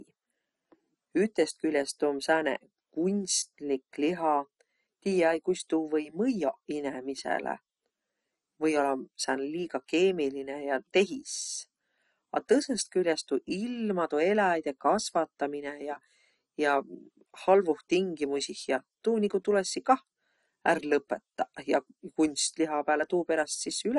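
Throughout, likely MP2 compression starved of bits, fitting a rate near 48 kbps, shuts off upper sub-bands, leaving nothing above 11.3 kHz. The speech sounds dull, gurgling and granular.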